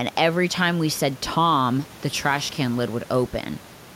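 No technical faults are audible in this speech; the only background is the room's own noise, sitting about 24 dB below the speech and belonging to the recording itself.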